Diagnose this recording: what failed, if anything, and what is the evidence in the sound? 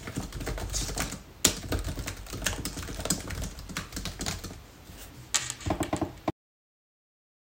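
A cut-off end at 6.3 s: the everyday sound stops mid-event and drops straight to digital silence for the remaining 1.2 s, with no decay or tail. This points to the storage or buffer stage, where the final buffers were never written or played out.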